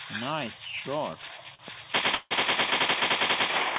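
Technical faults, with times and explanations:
1.55–1.61 s, short stall from a late packet: a packet showed up late, the jitter buffer ran dry, and the receiver stretched the last bit of sound for about 43 ms before carrying on from the same spot. Nothing's lost; the sound just hangs, pushing everything after it 43 ms later.
2.15–2.33 s, call audio freeze: the last sound is drawn out for about 158 ms as a fading buzz or hiss, with roughly 10 ms of true silence, then the audio resumes where it stopped with nothing missing. Likely packets held up in transit emptied the jitter buffer. The band stops at 4 kHz, which fits G.711 mu-law at 64 kbps.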